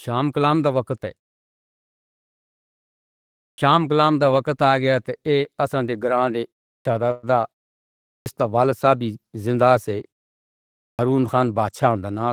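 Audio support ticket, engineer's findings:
Clipped start after a pause at 3.53 s, 6.80 s, 8.21 s and 10.94 s. Roughly 50 ms lost each time; sound begins abruptly from silence. Onsets cut on "شام کے" and, after "گیا تو آسُودہ گاہکی", on "شردھا کا". Probable component: output device sleeping in pauses of 0.35 to 2.41 s and needing time to wake, so the first sounds are swallowed.

Call audio freeze, 7.11 to 7.26 s, right after "تو آسُودہ گاہکی شردھا". Last sound held as a fading buzz for about 114 ms, then playback resumes where it stopped with nothing missing and delay grown by the same 114 ms. Likely cause: delayed packets draining the jitter buffer.

Jitter buffer speed-up, 11.68 to 12.26 s. Sound runs at about 110% speed, pitch unchanged, hurried. Around 70 ms trimmed in small pitch-period chunks as the receiver sheds excess buffered delay.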